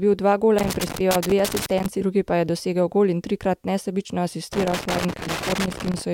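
From 0.59 to 1.86 s, ending just before "drugi pa je dosegel", and again from 4.53 to 6.02 s, loose connector crackle appears: a worn contact keeps breaking the line, chopping the signal into irregular scratchy bursts. That randomness separates it from evenly spaced digital clicks.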